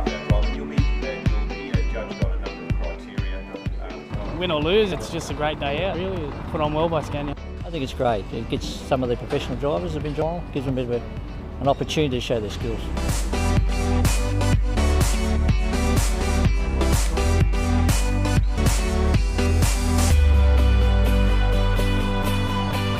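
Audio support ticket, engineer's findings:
Dropped buffer (overrun): forward skips at 4.92, 5.94, 10.22 and 18.58 s, losing roughly 0.3, 0.1, 0.3 and 0.2 s. Likely the capture side was not read before the hardware overwrote it. Waveform shows abrupt splices with no gap; spectrogram shows vertical broadband lines.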